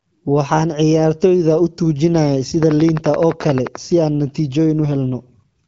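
A train of clicks runs from 2.63 to 3.76 s: some fifteen evenly spaced pops at 11.5 per second, likely from interference injecting repeated pulses.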